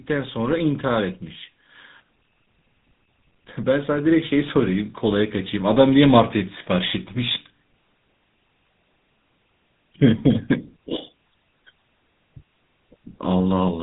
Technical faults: GSM full-rate codec; automatic gain rising

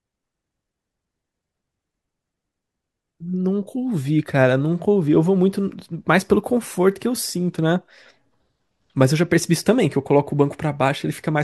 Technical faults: none

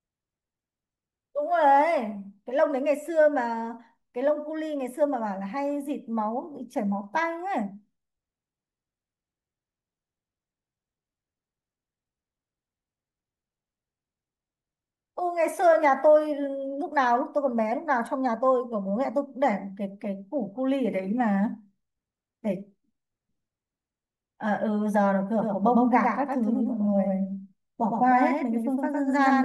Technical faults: doubled audio track

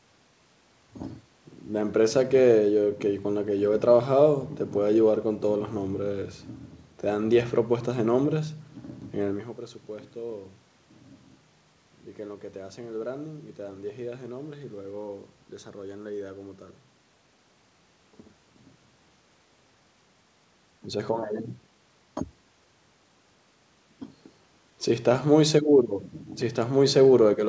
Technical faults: none

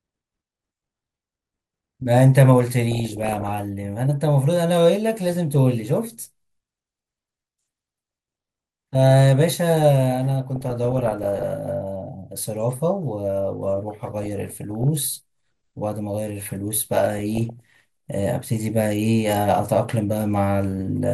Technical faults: MP2 compression; DAB burbling

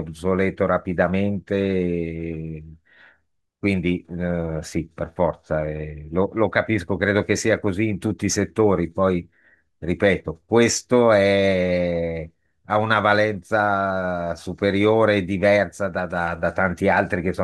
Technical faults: none

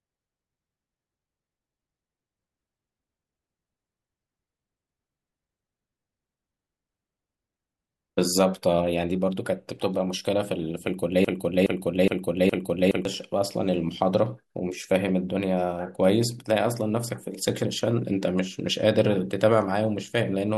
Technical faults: broken-record loop

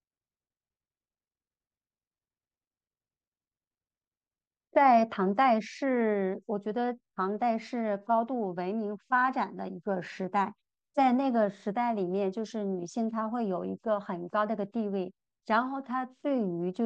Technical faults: none

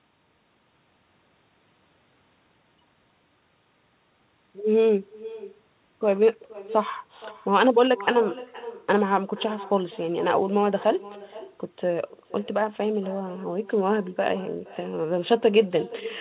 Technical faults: echo with no canceller

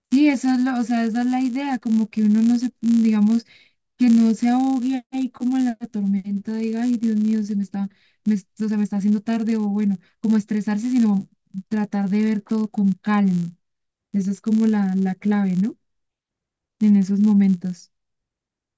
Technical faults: resampler restarted on every block

